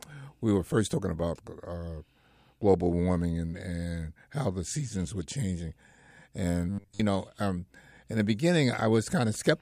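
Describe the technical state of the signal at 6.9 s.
At 6.9 s the speech is in the middle of a burst of robotic sound from repeated short buffers, running from 6.69 to 7.01 s, just before "know um in the". The voice flattens into a rigid metallic buzz fixed at 100 Hz, which fits a roughly 10 ms chunk being looped, with most of the span made of repeats. The likely cause is audio arriving too late, so the last buffer was replayed while real audio was skipped. Unlike a stutter or dropout, the words still roughly track through the constant buzz.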